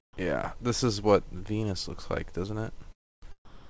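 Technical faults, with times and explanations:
0.13–0.17 s and 3.45 s to the end, sound dropped by the voice detector: the sound briefly gives way to a soft, steady noise bed, 40 ms at first, then about a quarter second at the close. That's likely the sender's detector mistaking real sound for background and sending comfort noise instead.
2.92–3.24 s, long network dropout: about 300 ms of audio just never shows up. You get near silence for almost the whole gap rather than a fading buzz, and the sound picks up afterwards with that chunk missing. Likely lost packets on the call path.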